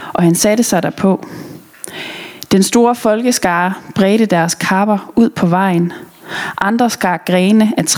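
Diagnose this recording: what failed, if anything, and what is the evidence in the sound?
The input gain was likely set far too high for the microphone, so a fast limiter or compressor in the capture processing clamps down on each loud sound. This gain pumping runs throughout the speech, with the level swinging by around 20 dB and a squashed result.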